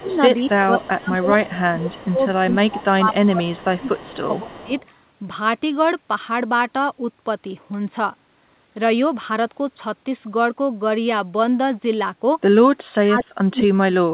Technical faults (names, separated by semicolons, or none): speech suppressed in double talk; echo leak